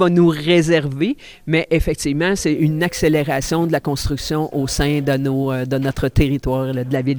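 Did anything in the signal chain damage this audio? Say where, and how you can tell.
Yes. From 2.56 s to 6.96 s a crude rate conversion damages the audio at the sample-rate conversion stage. A gritty, inharmonic fizz rides on the louder and brighter parts of the sound. These added tones don't belong to the material. The error sits roughly 25 dB below the signal. Samples were repeated to the nearest one, with no filtering. The pattern fits a conversion from 32 kHz up to 44.1 kHz.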